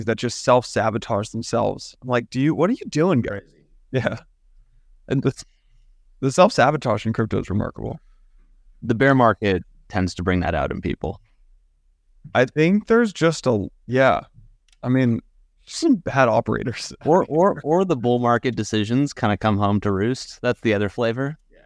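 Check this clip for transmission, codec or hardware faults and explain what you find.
No faults can be heard in the clip. There is nothing in it that needs explaining.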